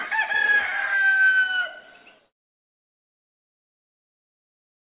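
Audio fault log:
throughout: aliasing. Everything above 4 kHz has been folded back down into the band instead of being filtered out, which fits a sample-rate drop to 8 kHz with no anti-alias filter. Bright content returns as unrelated, inharmonic tones roughly 20 dB below the main sound, so the top end turns gritty and metallic. A spectrogram shows energy running hard up to a sharp 4 kHz ceiling, with mirrored streaks that fall as the true frequencies rise.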